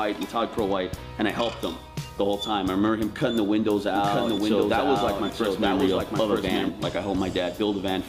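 A doubled audio track runs from 3.95 s to 6.69 s: a second, full-band copy of the sound plays about a second behind the original and at roughly the same loudness, so every event is heard twice. The late copy carries no decay or room colour of its own, and it cuts in and out abruptly at those two points. This is likely caused by the signal being captured again through a slower path, or by an edit leaving two copies out of step.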